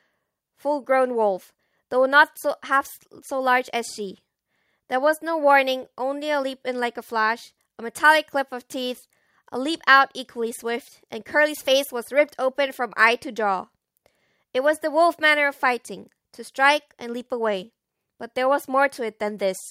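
No technical faults can be heard anywhere in this speech recording, so there is nothing to place in time order.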